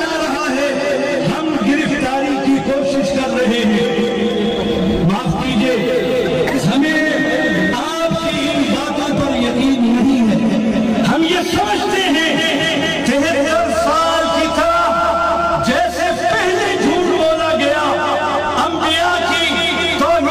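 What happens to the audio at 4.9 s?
Nothing goes wrong at 4.9 s; the audio runs through that moment intact, with no dropout, glitch or distortion.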